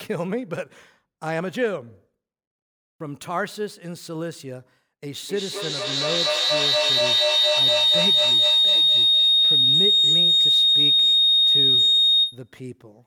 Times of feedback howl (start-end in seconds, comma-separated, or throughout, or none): 5.29-12.56